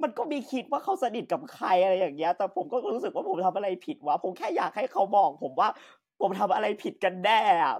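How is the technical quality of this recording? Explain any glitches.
The recording carries its signal steadily from beginning to end, with no glitches, interruptions or technical faults to be heard.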